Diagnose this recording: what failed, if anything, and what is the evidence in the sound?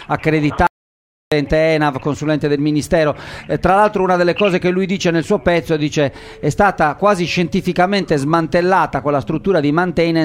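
Audio dropout to silence from 0.67 s to 1.32 s: the sound stops in mid-flow and the track holds silence for about 0.65 s, with no room tone or noise floor underneath, then resumes just as abruptly. The stage is the input path ahead of the recorder, most likely a momentary loss of the source, such as a disconnected device, a failed link or a brief mute, while the recorder kept writing silence. Whatever sounded during that gap was never captured.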